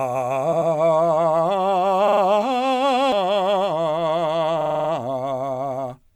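At 0.51 s the music stutters as repeated frames: a block of about 93 ms, which fits four compressed frames, plays twice more before moving on. This lengthens the music by about 186 ms and runs to 0.70 s. The same fault returns at 2.07 to 2.21 s, where a shorter 46 ms block repeats three extra times, and at 4.60 to 4.88 s, where a 46 ms block loops six extra times.

At 3.12 s a CD skip breaks the flow. There is a brief mute of a few milliseconds, heard as a tick, and then the music carries on from a different point, as though the pickup had jumped to another turn of the disc. Unlike the repeated frames, no block is played over and over. There is a single silent tick and an abrupt jump.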